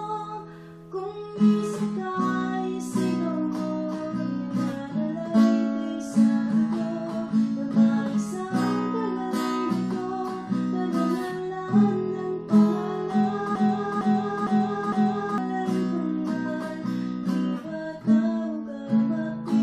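At 13.55 s the audio locks into a broken-record loop that runs until 15.38 s. A fragment of about 0.46 s plays four times in a row, each pass identical and butted directly against the next, so the sound stutters mechanically instead of moving forward. The likely cause is a stall in the player, encoder or stream, which kept resending the last fragment it held. Whatever should have played during those 1.8 s is missing.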